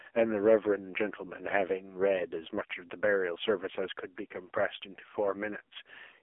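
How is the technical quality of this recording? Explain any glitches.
Quality is poor: the whole recording has passed through an AMR narrowband mobile codec. It runs in a low-bitrate, roughly 5.9 kbps mode, and speech is confined to the 300 Hz to 3.4 kHz band, with nothing above 3.5 kHz, and heavy modelling makes it buzzy and synthetic.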